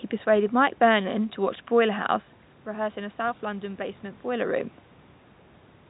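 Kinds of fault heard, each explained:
No technical fault can be heard in the signal, which carries telephone-band speech with some room noise and a couple of level shifts from the talker's movement.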